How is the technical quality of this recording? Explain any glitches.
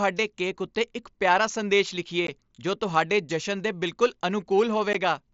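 The speech has two brief dropouts from unconcealed Bluetooth headset packet loss, audible through the light graininess of the mSBC wideband headset link.

At 2.27 s, just after "ਉੱਤੇ ਇੱਕ ਪਿਆਰਾ ਸੰਦੇਸ਼", and again at 4.93 s, about 15 ms of audio vanishes. This fits two lost headset frames replaced by silence with no concealment. Each is a short hole in the speech with abrupt edges. A waveform shows a flat, sharp-edged gap, and a spectrogram shows a thin vertical stripe.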